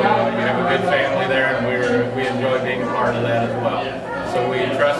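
No technical faults can be heard anywhere in the audio.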